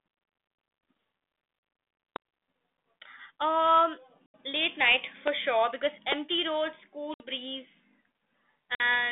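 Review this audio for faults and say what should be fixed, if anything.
Packet loss on an ADPCM call leaves hard-edged silent gaps at 1.59–1.63 s (40 ms), 4.26–4.35 s (80 ms, before "late night"), 7.14–7.27 s (60 ms) and 8.75–8.82 s (50 ms). The 32 kbit/s G.726 decoder's predictor and step size then drift from the sender's. Speech returns slightly distorted. To prevent it, reduce loss on the network path and add concealment that resets the decoder state.

A loud pop hits at 2.16–2.18 s, about 15 dB above the speech. Two more land at 5.28–5.30 s, after "late night", and at 6.12–6.14 s, after "sure because". Both are about 20 dB up. Each is one sharp spike over continuing speech, likely a voltage step from a switch, plug or static. To prevent it, secure the connectors, ground the equipment and control static near it.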